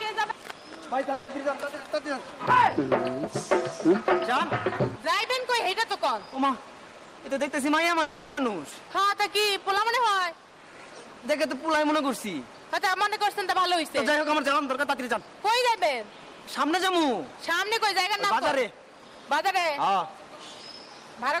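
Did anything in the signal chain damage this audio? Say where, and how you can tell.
Yes. The damage sits in the network and jitter buffer stage of a call path.

At 1.13 to 1.30 s and again at 8.02 to 8.39 s the sound stalls: the last moment is stretched into a fading buzz for about 150 ms and then 350 ms, and afterwards it resumes exactly where it stopped, with nothing lost. That is a call audio freeze, likely from delayed packets draining the jitter buffer while the receiver concealed the gap. Each freeze pushes the playback delay later by its own length.

From 6.99 to 7.93 s the sound runs about 10% fast without any change in pitch, and from 12.57 to 16.97 s it runs about 5% fast, so both passages feel hurried. This is jitter buffer speed-up. The buffer held more than its target, and the receiver trimmed repeated pitch-period-sized slices to catch up, dropping roughly a tenth of a second in the first stretch and about a fifth of a second in the second.

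At 8.71 to 8.74 s the playback jumps forward with only a tiny bridge of about 10 ms, and roughly 100 ms of material is simply gone. The two sides butt straight together. This is a skip ahead: a stretch was discarded, either lost in transit or thrown out when the buffer overflowed, while later audio was already queued. The discard cuts the playback delay by about the same 100 ms.

Right after that, from 8.89 to 10.04 s, the sound drags at about 92% speed. The pitch stays put, but sustained sounds are drawn out. This is jitter buffer slow-down. The buffer was running low or had just raised its target delay, so the receiver rebuilt its reserve by repeating single pitch periods, adding 93 ms in total across the stretch.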